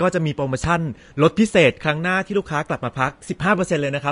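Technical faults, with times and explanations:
Throughout, Vorbis compression: nothing is present above 10.6 kHz, and the remaining treble of the speech is hissy and grainy, with roughened tones and smeared consonant attacks. This likely comes from low-quality Vorbis coding, consistent with about 36 kbps, where coarse treble quantisation turns fine detail into noise-like residue.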